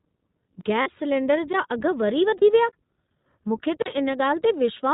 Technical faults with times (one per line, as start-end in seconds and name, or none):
0.00-4.93 iLBC codec
0.61-0.63 block of digital silence
0.82-0.88 lost iLBC frames
2.38-2.43 lost iLBC frames
2.69-2.73 block of digital silence
3.82-3.86 block of digital silence